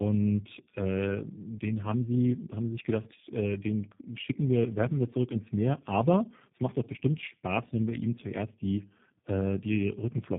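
Throughout, tandem speech coding: speech recoded by two codecs in a row, suggesting AMR-NB then G.729A, sounds muffled below 3.8 kHz, and rougher and more warbly than either codec alone would make it.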